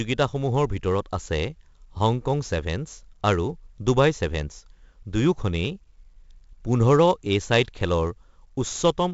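Speech damaged from start to finish by heavy 4-bit ADPCM compression, consistent with a stream of about 64 kbps. Every loud syllable carries a gritty hiss that rises and falls with the level, and sharp onsets smear because the coarse step size cannot adapt quickly enough. Nothing exists above 7.7 kHz, which dulls the sound and points to a low sample rate. A spectrogram shows a hard ceiling at 7.7 kHz and a broadband noise haze that brightens with each loud stretch. The waveform looks fuzzy and jagged around the envelope, with ragged overshoot at attacks.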